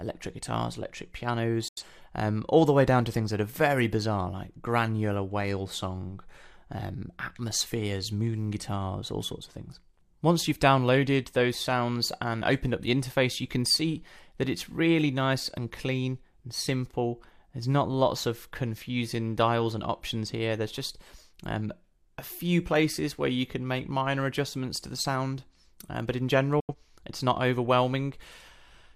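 Digital broadcast dropouts at 1.68–1.83 s and 26.60–26.75 s: the receiver stopped getting valid frames, muted with a 3 ms fade, and resumed later in the programme. About 85 ms of sound is lost in each hole, which fits two lost frames.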